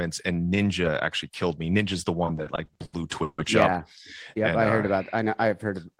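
From 2.25 to 3.40 s, after "killed me ninja's the", repeated stalls (stutter) occur. Late packets left the jitter buffer empty several times, and the receiver held the last sound through 350 ms of gaps, the longest 150 ms. Nothing is lost, but the speech drags and stammers.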